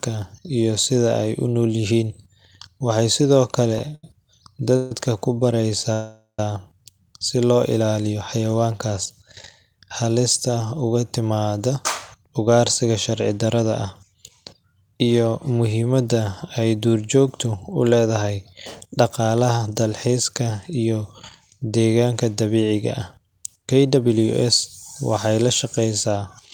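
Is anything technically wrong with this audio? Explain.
Yes, this speech clip has three kinds of network playback problems.

Between 3.78 and 4.92 s there's a run of repeated stalls (stutter). Packets arrived too slowly to keep up with playback, so the jitter buffer emptied three times and the receiver stretched the last sound to cover each gap. That adds up to 235 ms of filler, with the longest gap at 147 ms and nothing actually lost. It's about a fifth of that stretch, and it comes across as a dragging, hiccupy stutter.

From 5.93 to 6.39 s there's a call audio freeze. The likely cause is packets getting held up in transit until the buffer ran dry. The receiver carried the last sound forward for 456 ms, and it decayed to silence for the final 120 ms or so. Then the audio picks up exactly where it stopped. Nothing is missing, but there's now a 456 ms pause, and everything after it lands that much later.

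Then come three jitter buffer speed-ups, where the buffer had built up extra audio and the receiver shaved off tiny pitch-period-sized chunks to catch up:
11.69 to 15.47 s, at about 107% speed, roughly three tenths of a second trimmed.
17.83 to 19.92 s, at about 108%, around a fifth of a second trimmed.
25.65 to 26.17 s, at about 107%, just a few hundredths of a second trimmed.

The pitch stays the same in all three, but the talking sounds noticeably hurried.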